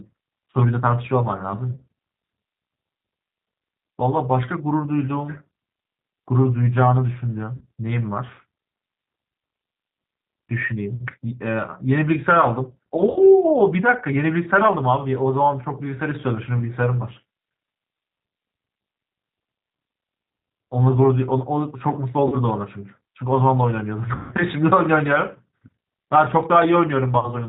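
The whole clip runs through a G.729 codec at 8 kbit/s, and you can plainly hear it. Nothing gets through above 4 kHz, so the speech sounds boxed-in and dull. The encoder rebuilds each 10 ms frame from a vocal tract filter, a pitch predictor and a handful of pulses, and that sparse pulse model gives the voice a slightly rough, synthetic edge.

On top of that there's VoIP packet loss concealed by the speech codec, six times: around 1.75 to 1.81 s, 7.57 to 7.63 s, 13.10 to 13.20 s, 22.28 to 22.38 s, 24.15 to 24.35 s, and 27.19 to 27.30 s. Each time, the decoder lost audio and filled the gap by stretching its last pitch and filter with falling gain. You get a brief buzzy tone or coloured noise that fades. The gaps are mostly 20 to 60 ms, which fits losing one to three 20 ms packets. The one at 24.15 s is the worst, covering about 160 ms, so the concealment drags on longer. After each gap the speech stays weak or a bit mangled for a moment before it recovers.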